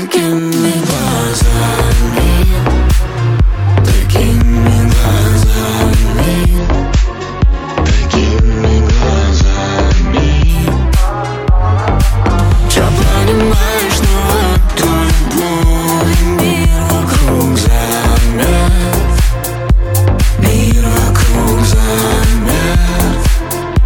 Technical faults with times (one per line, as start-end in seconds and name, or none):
2.41-3.18 drift correction step
6.58-10.49 adaptive stream at a lower bitrate
6.75-8.16 drift correction step
10.85-11.76 drift correction step
14.42-15.38 drift correction step